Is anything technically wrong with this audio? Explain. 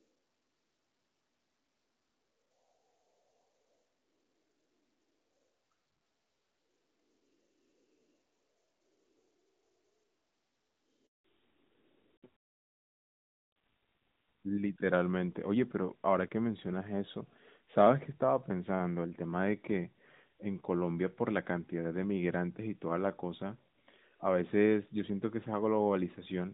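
Yes, two faults sit together a little past the 11-second mark of this speech clip.

A handover gap runs from 11.06 to 11.24 s. While the call switched networks, no speech frames arrived, so the voice dies away within a few tens of milliseconds and stays silent for 180 ms. Unlike a brief dropout or glitch, it has a clean, sustained silence, and the sound that follows has a different character.

Fallback to narrowband follows from 11.24 s to the end. The call left HD Voice for an older narrowband codec, so nothing above 4 kHz survives and the voice turns duller and rougher. Before the gap the light coding fits AMR wideband at around 12.65 kbit/s. The drop is a persistent step change at the handover point, which separates it from a gradual bandwidth loss or a filtered recording.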